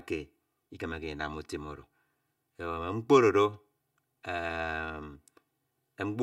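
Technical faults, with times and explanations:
Throughout: channel delay (comb filtering). One channel of the speech arrives roughly 3 ms behind the other, and the two are summed to mono. Sound common to both channels cancels wherever the delayed copy lands out of phase, cutting fixed notches into the spectrum. The first falls around 200 Hz, and more repeat at even intervals above it. The voice therefore sounds hollow and phasey, with thinned body and a tube-like colour.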